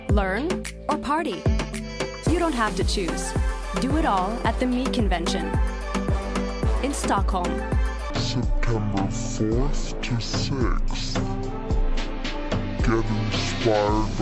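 From 8.10 s to the end at 14.21 s, the audio is played back at roughly half the rate it was captured at, with no resampling in between. This is a wrong sample rate fault, consistent with 44.1 kHz material being clocked out at about 22 kHz. Because speed and pitch are tied to the same clock, the sound runs at half speed and drops a full octave, 12 semitones, turning slow, heavy and dull.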